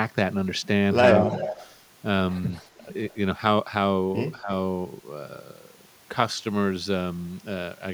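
From 1.25 to 1.67 s there's an echo leak: a delayed copy of the speech trailing by 224 ms, sitting only about 10 dB under it. It's likely a far-end speakerphone whose canceller didn't scrub its mic. It returns very faintly, just a wisp, at 2.55 to 2.67 s. Then around 4.4 to 4.5 s the speech is suppressed in double talk, dipping by about 10 dB for roughly a tenth of a second while both sides overlap, likely as the canceller pulls the talker down along with the echo.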